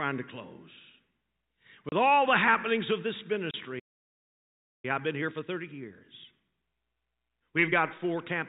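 Packet loss filled with silence occurs at 1.89 s and again at 3.51 s. Each time the sound drops out for 30 ms, a gap that suggests one missing 30 ms packet. The receiver played nothing in place of the missing audio, so each hole opens and closes on a hard edge. The telephone-band sound, which fits G.711 coding, is cut off abruptly rather than faded.

A playback stall follows at 3.79 s. The sound stops mid-flow for about 1.04 s and resumes at 4.85 s. The likely cause is that the player's buffer ran dry or its thread was held up, leaving the output silent until data arrived again. The break is long enough to register clearly as dead air, not a glitch.

Time-compressed catch-up runs from 4.85 s to 7.85 s, as the player works off the backlog the stall left behind. It trims small slices out of the audio and cross-fades the joins, so the sound plays about 1.15 times faster for those three seconds while its pitch stays normal. 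The result sounds hurried.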